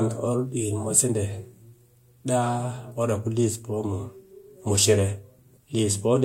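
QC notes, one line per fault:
0.14–6.17 s, clock slip clicks: two devices in the chain are likely running on separate, unsynchronised clocks that disagree by something like 150 ppm, so a single sample is dropped or repeated each time the drift adds up to one whole sample. That happens roughly every 0.15 s, around fifty times across the speech, giving a faint, evenly spaced ticking that sits on the voiced sound and is most noticeable on louder, sustained passages.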